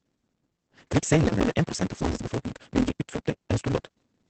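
A block size mismatch (truncated) runs through the whole of this speech clip. A stage downstream reads shorter blocks than the stage before it writes, so the tail of every block is discarded. The result is a steady buzz at 172 Hz, which fits a 256-sample read block, and the speech hurries along 1.88 times faster than normal while staying at roughly its usual pitch, because whole chunks are dropped rather than resampled. Opus voice compression is also present throughout. Opus is in its SILK linear-prediction mode at wideband, working in 20 ms frames, and nothing is heard above 8.6 kHz. The coarse coding of the excitation leaves plainly audible damage: the speech sounds muffled, hoarse and slightly robotic, which fits a bitrate of about 12 kbps. A CD skip occurs at 1.40 s. The laser lost its track and jumped to another turn of the disc's spiral, so the player muted very briefly, giving a small tick, and carried on from a different point in the recording, leaving an abrupt break in continuity.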